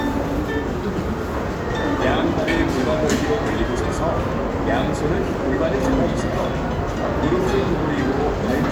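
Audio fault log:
No faults are present in this recording of sounds.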